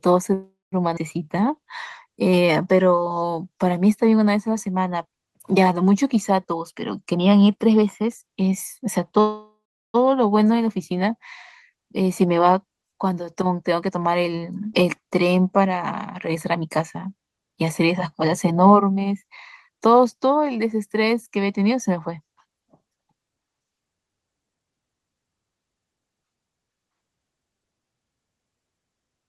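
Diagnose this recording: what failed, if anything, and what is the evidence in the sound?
Call audio freeze, network stage: at 0.33–0.74 s and 9.20–9.96 s the sound stretches into a fading buzz, then silence, before resuming intact. The likely cause is a jitter buffer running dry.

Skip ahead, network/jitter buffer: at 0.96–0.99 s and 14.73–14.76 s roughly 0.2 s of speech vanishes, the two sides spliced almost directly with no audible gap.

Jitter buffer slow-down, buffer stage: 1.23–3.32 s plays at 90% speed, same pitch, drawn out by 208 ms as pitch periods repeat to rebuild reserve.

Jitter buffer speed-up, buffer stage: 6.48–9.12 s (113%), 13.61–19.71 s (105%) and 24.56–26.47 s (115%) run hurried at unchanged pitch, trimming roughly 0.3–0.4 s each.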